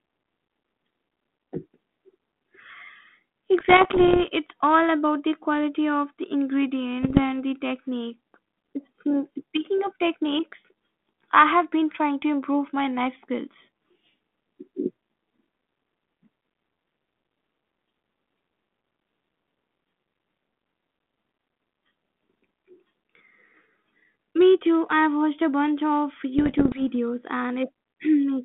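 Bit errors on the ADPCM link hit three times: 3.6 to 4.28 s before "it's all about the", 7.02 to 7.23 s before "the technique", and 26.38 to 26.82 s after "watched a bunch of". Flipped bits, around 0.7 to 1 in a hundred, throw the decoder's step size and prediction off, which produces pops, rough bursts and brief jumps in level. The 32 kbit/s G.726 telephone band, about 150 Hz to 3.5 kHz, carries these errors.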